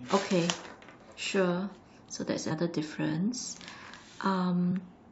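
Around 2.50 to 2.52 s the speech jumps forward by roughly a tenth of a second, and at 4.70 s it jumps again by about 50 ms. Both are compressed frames skipped: whole coded frames were lost or rejected by the decoder, so that stretch of audio never plays. The skip lengths fit multiples of a 23.2 ms frame.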